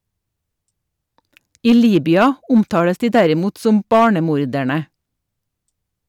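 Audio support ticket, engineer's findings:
Hard clipping, 1.67–4.07 s. Gain stage or converter input driven about 5 dB past full scale; peaks exceeding the ceiling cut flat. Squared-off tops generate high-order harmonics across the upper spectrum. Audible as crackle on speech peaks throughout the span, clean outside it. Probable cause: excessive preamp or digital gain ahead of the limit.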